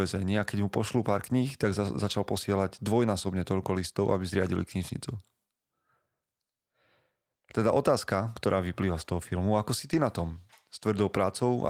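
At 9.93 to 9.99 s, two lost packets are rebuilt from error correction. The following packets carried low-bitrate copies, so the decoder filled about 40 ms of speech without a gap. Those frames sound rougher and noisier than the surrounding audio.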